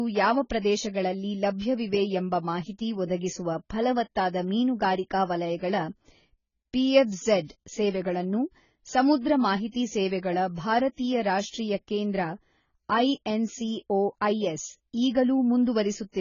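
The speech sounds dull and smeared throughout, with nothing above 7 kHz and a warbling, fizzy edge on sustained sounds and sibilants. This is likely heavy AAC compression. The severe band-limiting fits AAC-LC at a very low bitrate, around 16 kbps. From 9.71 to 9.74 s, a hiss of about 32 ms leads into a softened onset just before "ಸೇವೆಗಳ ಭಾರತೀಯ ರಾಷ್ಟ್ರೀಯ ಕೇಂದ್ರ". This is pre-echo: quantisation noise sized for the loud attack spread across the whole transform block, smearing into the quiet moment before it.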